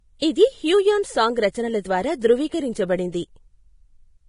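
Vorbis compression throughout: nothing above 10.5 kHz, with hissy, grainy treble and smeared attacks, as coarse quantisation turned detail into noise, likely from Vorbis coding near 29 kbps.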